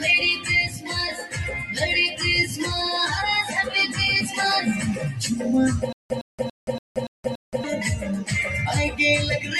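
A noise suppressor built for speech runs across the whole clip. It treats steady or sustained sound as noise and pulls it down, so held parts and tails sink while attacks get through, giving a pumping, thinning quality with level swings of around 10 dB.

The sound cut by the noise suppressor is clearest at 0.68 to 0.9 s and again at 1.15 to 1.38 s. The suppressor clamps down harder there, dropping the sound by about 10 dB for roughly 200 ms each time.

From 5.93 to 7.64 s there is a stutter with silent gaps. The player or stream likely stalled and replayed its last fragment on each retry. A 110 ms burst repeats six times, each followed by about 175 ms of silence, giving an even 286 ms cycle. The audio that should have played there is missing.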